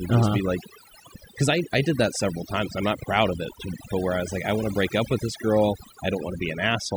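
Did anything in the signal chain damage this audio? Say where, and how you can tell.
Yes. Overdone noise removal in the call processing stage runs throughout: bands near the noise estimate are gated hard, leaving near-silent gaps with twinkling specks. A spectrogram shows isolated blinking time-frequency dots and ragged, hollowed harmonics.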